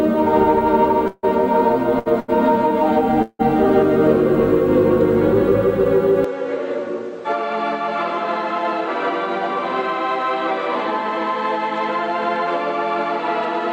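Two brief call audio freezes stop the audio at 1.07 to 1.25 s and 3.22 to 3.41 s. In each, the last sound carries on as a fading buzz, for 156 ms in the first and 170 ms in the second, and then goes silent, for 20 ms in the first and 50 ms in the second, before resuming where it stopped. The likely cause is held-up packets draining the jitter buffer. On a waveform each shows as a decaying smear ending in a flat gap. Two short stalls from a late packet follow at 1.99 to 2.08 s and 2.20 to 2.30 s. Each holds a sound too long, by 68 ms and then 85 ms, with a slight buzz or dip, because a packet arrived late and the receiver stretched the previous audio to cover it. On a spectrogram they appear as smeared, horizontally streaked patches. At 6.24 s there is no silence, but the input has likely switched to a poorer device. From there to the end the sound turns duller and drops about 5 dB in level, and new background noise sits roughly 30 dB below it. 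The spectrogram shows a hard ceiling at 8.4 kHz, with the band above it empty after the switch.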